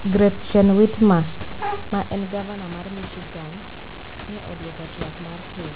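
No faults can be heard anywhere in this recording.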